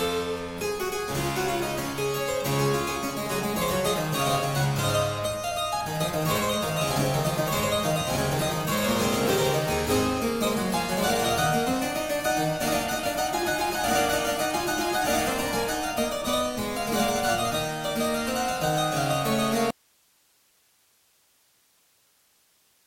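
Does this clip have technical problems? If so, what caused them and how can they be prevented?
Yes. At 19.71 s the sound cuts out abruptly and never returns, leaving only hiss roughly 40 dB down. That's an audio dropout to a faint residue, likely a lost upstream feed into a still-live input. Secure cables and monitor the source while recording.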